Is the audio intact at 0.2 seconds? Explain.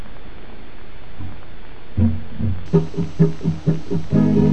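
No. From 0.0 to 2.66 s the sound is deep and dragging, roughly ten semitones low: a section at the wrong speed, likely played at 0.564 times its recorded rate.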